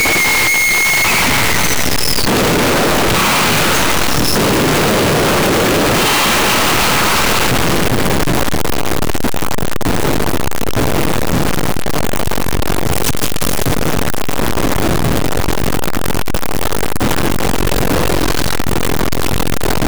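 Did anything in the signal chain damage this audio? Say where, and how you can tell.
Yes. The damage sits at the sample-format conversion stage, and it runs the whole clip. The waveform is nearly square and stays at an almost fixed, high level from start to finish. Quiet passages are as loud as loud ones. Background noise matches the foreground. This float read as integer fault is likely caused by 32-bit float data being read as 32-bit integers. The sign and exponent bits then dominate each sample's value.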